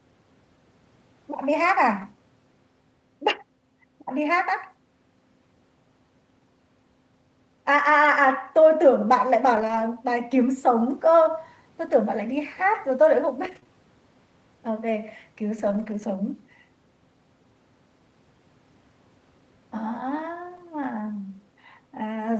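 Brief rough, grainy patches break up the speech at 2.01 s, 9.55 to 9.81 s, 11.87 to 11.93 s, 13.43 to 13.57 s, 15.58 to 16.04 s and 20.56 s. The sound never drops out, but each stretch turns coarser and noisier. These are lost packets rebuilt from error correction: Opus packets went missing, and each following packet carried a low-bitrate copy that the decoder played instead. The longest such stretches are 140 ms and 240 ms.

Right after the 13.43 s patch, from 13.59 to 13.75 s with a second dropout at 13.63 to 13.67 s, the speech briefly smears and wobbles. This is short concealed packet loss: about 20 ms of audio arrived too late each time, so the receiver extended the preceding sound to fill the hole and blended back into the real signal. It stretches the audio by roughly 15 ms.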